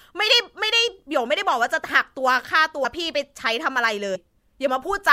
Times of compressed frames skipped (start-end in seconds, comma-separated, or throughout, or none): 2.84, 4.14